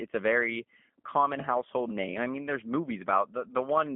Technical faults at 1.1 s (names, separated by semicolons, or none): G.729 codec